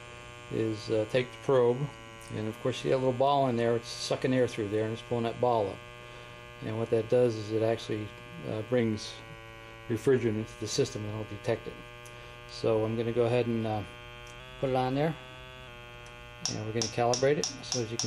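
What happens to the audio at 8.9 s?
A drift correction step, likely from clock-matching software that abruptly lowered the playback rate to manage its buffer, runs from 8.80 s to 10.41 s. Playback slows by about 6% (-5.98%), and because speed and pitch move together, the sound drops about 107 cents, just over a semitone, as a sudden detuned, dragging stretch. At 10.41 s the rate returns to normal and the pitch comes back up.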